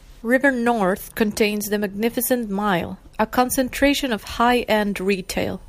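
From 3.81 s to the end, a faint USB whine, about 45 dB below the speech, appears: a fixed 1 kHz harmonic series peaking at 9 kHz, as the bus's 1 ms frames leak through power or ground. Mains hum would sit at 50 or 60 Hz instead.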